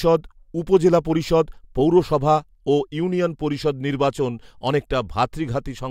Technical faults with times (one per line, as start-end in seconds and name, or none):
none